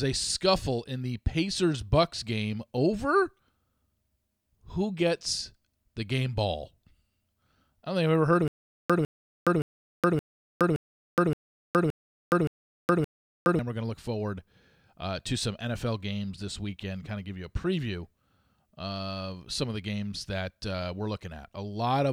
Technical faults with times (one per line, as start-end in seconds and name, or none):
8.48-13.59 stutter with silent gaps